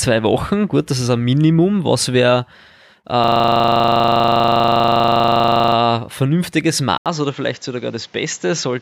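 From 3.24 to 5.76 s, a system hang loop replays one 40 ms slice of audio over and over, about 60 times, producing a steady 25 Hz buzz. Unlike a dropout stutter, every cycle is identical, and speech picks up afterwards with essentially nothing skipped.

At 6.98 s an 80 ms silence falls, and then the speech turns duller and quieter to the end, with nothing above 7.6 kHz, a level drop of about 5 dB, and a new noise floor about 35 dB down. This is likely an input switched to a poorer device, not a plain filter, because of the gap and the fresh background noise.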